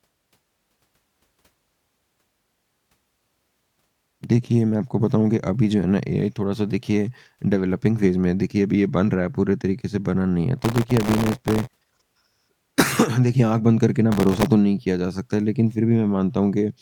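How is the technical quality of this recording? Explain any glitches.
The recording has two glitches. Both are processor overload crackle, at 10.59–11.86 s and 14.12–14.46 s. The processor repeatedly missed deadlines for very short buffers, each well under a millisecond, and replayed stale audio each time. This produced gritty crackle over the speech.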